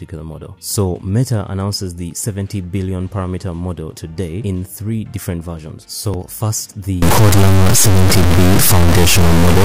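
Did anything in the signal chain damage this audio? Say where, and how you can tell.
Yes. From 7.02 s to the end at 9.65 s the audio turns harshly buzzy, the mark of a stuck bit, likely a failed converter data line. A high bit, worth roughly -5 dBFS, shifts values in large square steps, filling the spectrogram with broadband hash, even in pauses.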